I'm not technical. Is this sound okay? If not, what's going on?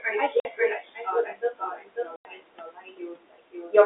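No. Four things went wrong.

Doubled audio track: the sound was most likely picked up a second time by a slower route, or an edit left two copies out of step, and both were mixed together. You hear every bit of speech twice, the second copy about half a second later and roughly as loud as the first. It runs through the whole clip, so the speech overlaps itself. The repeat has no echoey tail the way a real room would give it.

Noise suppressor artifacts: a filter that tries to remove steady background hiss works on the sound in tiny slices all the time. In this clip it keeps pushing the background down in the gaps and letting it back up under the speech, so the hiss seems to breathe in and out.

Speech cut by the noise suppressor: that same filter also mistook parts of the speech for background noise and turned them down. This happens from the very start to about 3.74 seconds, adding up to roughly three seconds of affected speech. 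The softer sounds and word endings get swallowed, so parts of the speech seem to fade or go missing even though the speech was there.

Packet loss filled with silence: the audio travels in small chunks, and some of them never arrived, so the receiver played nothing in their place. There are two holes. The first runs from 0.40 to 0.45 seconds (50 milliseconds) and the second from 2.16 to 2.25 seconds (90 milliseconds). Each is a sudden dropout with a sharp edge that can click as the sound cuts out and back in.

The background noise from the room and the narrow telephone sound are part of the recording and the phone line, not faults.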